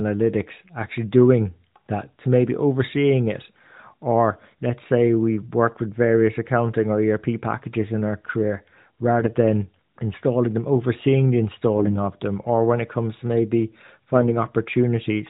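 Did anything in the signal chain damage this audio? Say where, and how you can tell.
Yes, on the radio link: AMR bit errors at 9.20–9.33 s, 11.77–11.99 s and 14.14–14.33 s. Pitch and level hold but the speech turns hoarse and gargly, as flipped minor bits misplace excitation pulses and skew fine gain and spectral values. Packet loss would instead leave gaps or repeats.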